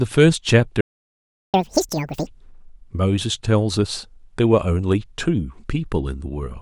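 The player most likely ran short of data at 0.81 s, causing a playback stall: the speech cuts out mid-flow for about 0.73 s before resuming at 1.54 s. To recover the lost time, it then plays its backlog at twice normal speed in a catch-up at higher speed, so from 1.54 to 2.27 s the speech is rushed and raised by roughly ten semitones before returning to normal.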